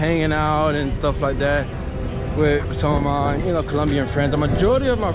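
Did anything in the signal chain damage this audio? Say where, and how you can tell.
No, nothing in the chain damaged it: the only mark is the call path's band limit, with nothing above 4 kHz, which fits a 64 kbps G.711 mu-law codec working as designed.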